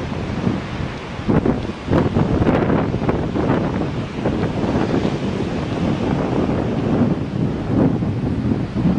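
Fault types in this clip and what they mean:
hard clipping: Some stage received about 6 dB more level than it could pass, so throughout the clip the loudest peaks are sliced flat. Only a small fraction of the audio, well under one percent, exceeds the limit, and those flattened tops add distortion harmonics high in the spectrum.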